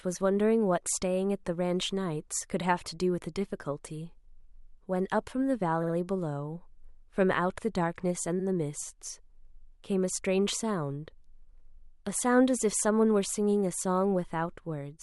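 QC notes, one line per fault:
5.82–5.94 s: repeated frames. A quick stutter as the same 60 ms slice of speech plays three times in a row. A run of compressed frames was duplicated, so the decoder replays it and the audio gains 120 ms.
8.39–8.45 s: repeated frames. A shorter stutter where a 60 ms block is heard twice. The duplicated frames decode once extra, stretching the audio by 60 ms.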